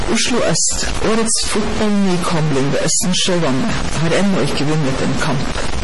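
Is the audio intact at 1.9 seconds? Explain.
No. At 1.9 seconds, as throughout the clip, a data bit is likely stuck at one value, so about half the samples are off by that bit's weight, adding distortion and noise that fill even the pauses. The speech also shows heavy damage that likely comes from MP3 compression at a rate that fits about 32 kbps. Weak frequency lines were dropped and switch on and off, which sounds watery and swirly, and nothing remains above 11.4 kHz.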